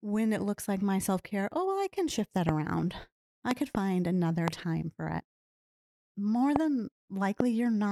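Speech with sharp loud pops, about 20 dB above the voice, at 2.49–2.51 s, 3.51–3.77 s (a double pop), 4.48–4.50 s, 6.56–6.58 s and 7.40–7.43 s, likely from voltage spikes from a plug, switch or static.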